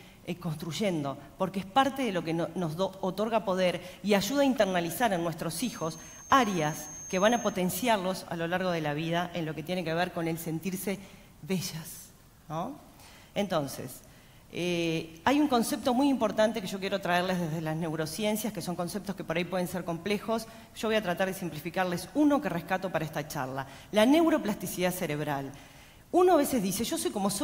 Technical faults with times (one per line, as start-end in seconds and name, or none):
5.49-7.61 feedback whistle